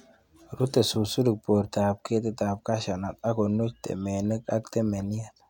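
Nothing in this speech recording stands out as a technical fault at any point, so there's nothing here to flag.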